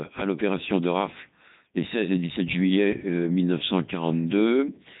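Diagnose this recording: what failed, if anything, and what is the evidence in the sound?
Codec 2 vocoder damage runs through the whole recording, and the failing stage is the codec. The speech has a heavy synthetic, buzzy quality, and nothing reaches above about 3.8 kHz, which fits Codec 2 at its 3.2 kbit/s mode. A vocoder of this kind never carries the waveform itself. It sends only pitch, voicing, energy and a coarse spectral envelope, and the decoder rebuilds the voice from sine waves.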